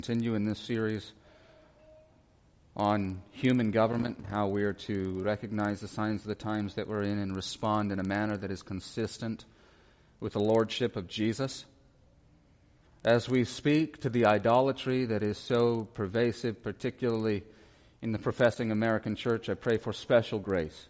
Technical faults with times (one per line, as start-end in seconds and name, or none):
0.00-20.89 resampler restarted on every block